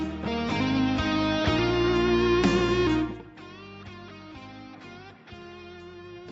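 No faults found; the level moves are smooth fader rides, and the audio tops out at 8 kHz, as expected for a call path.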